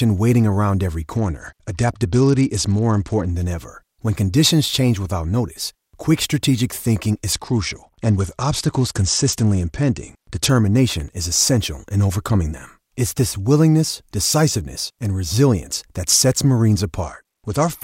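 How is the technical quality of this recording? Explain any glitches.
The recording has two kinds of fault: repeated Bluetooth SBC bit pool drops and one burst of loose connector crackle.

The Bluetooth SBC bit pool drops run from 1.16 to 3.31 s (after "waiting around every", recovering before "than ever"), from 7.32 to 10.49 s (after "notice quick strategic thinking") and from 17.02 s to the end. The speech turns dull and gritty, consistent with the encoder falling from bit pool 28 to about 10, near 84 kbps. That starves the upper sub-bands and quantises the rest coarsely.

Loose connector crackle occurs from 10.91 to 11.09 s, just before "is essential in overcoming". It is a short, irregular scratchy burst. A contact making and breaking rapidly chops the signal, and any DC on the line adds pops.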